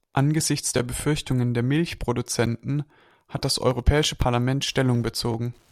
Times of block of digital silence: 0.40, 4.04

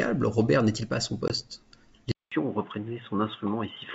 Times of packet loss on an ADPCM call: 1.28-1.32

